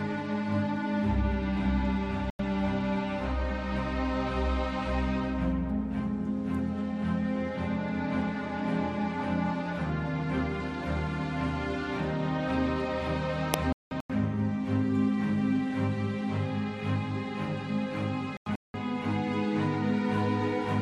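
Corrupt frame muted: damaged compressed frames were rejected by the decoder and replaced with silence, so the audio drops out abruptly at 2.30 s for 0.09 s, at 13.54 s for 0.56 s and at 18.37 s for 0.37 s, each gap spanning several frames, with timing preserved afterwards.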